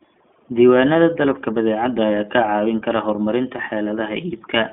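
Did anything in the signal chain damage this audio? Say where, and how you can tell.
Yes. The damage is at the codec stage, an iLBC codec, and it runs through the whole clip. Nothing above about 3.7 kHz survives, and the band sits between roughly 200 Hz and 3.5 kHz, giving the narrow telephone sound. The speech has a plainly audible rough, synthetic texture because each short frame's excitation is coded independently of the one before. That fits 20 ms frames at the 15.2 kbps mode.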